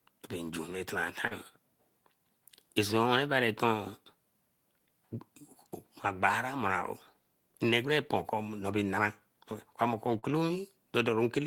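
Speech with two instances of short concealed packet loss, at 1.27 to 1.34 s and 10.19 to 10.26 s. In each, about 40 ms of the stream arrived too late for the decoder. The receiver bridged the gap by extending the preceding sound, about 33 ms at the first point and 39 ms at the second, then crossfaded back into the real signal. Each is heard as a brief smear or wobble, and any short consonant there may be lost.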